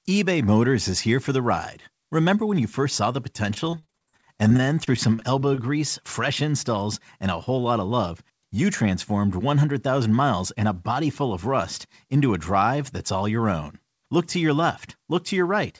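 Speech, carried over a call path with nothing above 8 kHz, which fits a wideband codec such as G.722. From 3.54 to 5.60 s, after "you first saw the", repeated packet loss (robotic sound) leaves many holes up to 45 ms, with about 23% patched. On a spectrogram this shows as frozen, smeared harmonic stripes and brief breaks. Jitter buffer speed-up trims pitch periods to drain excess buffered audio. From 7.25 to 8.11 s, before "you transformed", speech runs 109% fast, losing about a tenth of a second. From 10.13 to 10.63 s, before "a body full of", it runs 105% fast. The waveform shows compressed syllable spacing at unchanged pitch.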